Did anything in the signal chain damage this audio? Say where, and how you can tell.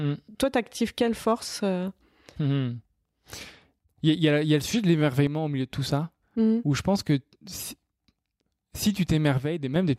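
Yes. One channel drops out twice, 5.27 to 5.70 s and 9.38 to 9.76 s, and the speech abruptly falls about 6 dB before recovering. The likely cause is a loose analogue connection losing one stereo leg before the mono sum. On a waveform the envelope suddenly halves, and a spectrogram dims evenly across all frequencies.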